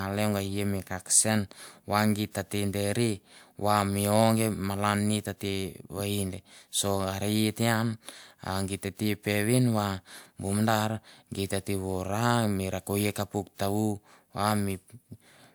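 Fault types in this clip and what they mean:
No faults are audible.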